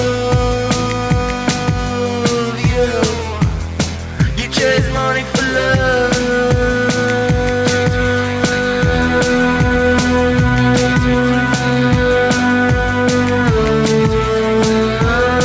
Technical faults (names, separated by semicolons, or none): gain pumping